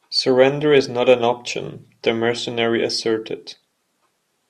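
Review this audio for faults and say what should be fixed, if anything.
No faults found, so nothing here needs fixing.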